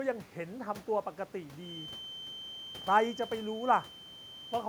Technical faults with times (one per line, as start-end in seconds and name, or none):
1.55-4.68 feedback whistle